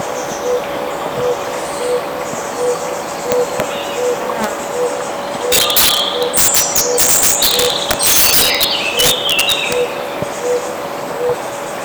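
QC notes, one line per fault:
3.32–3.6 s and 4.44 s, integer overflow: peaks only about 1 dB past the integer limit wrap to the opposite sign instead of being held, so you get short, sharp cracks.
5.52–9.73 s, integer overflow: pushed about 10 dB over, the loud parts keep flipping across the full range, giving violent crackling that's far harsher than clipping.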